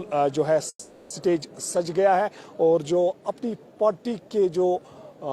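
At 0.69 s the audio stalls in a call audio freeze: the last sound is stretched into a fading buzz or hiss for about 410 ms, with a brief silence, until 1.12 s. Unlike packet loss, it then resumes exactly where it stopped, nothing skipped but everything after running 410 ms late, likely from delayed packets emptying the jitter buffer.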